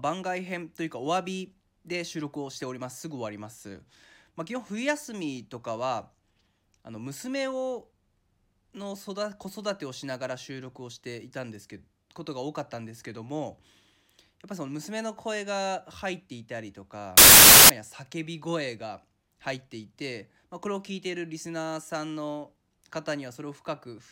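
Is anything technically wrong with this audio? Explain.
Yes. From 17.18 to 17.70 s the speech is replaced by loud, harsh broadband noise: samples built from the wrong bytes. The reader assembles each sample misaligned or byte-swapped, so the rapidly changing low bits land in the most significant positions, producing harsh noise lasting about half a second.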